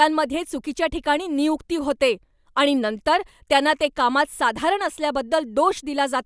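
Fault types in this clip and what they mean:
No technical fault can be heard anywhere in the speech signal.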